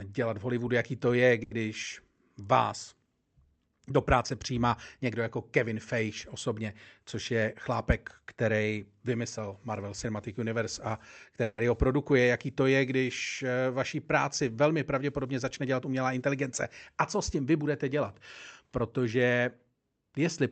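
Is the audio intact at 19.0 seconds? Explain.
No. From 18.81 to 19.15 s, a jitter buffer speed-up dropped about 40 ms of pitch periods to cut delay. The speech plays 10% faster at unchanged pitch and sounds rushed.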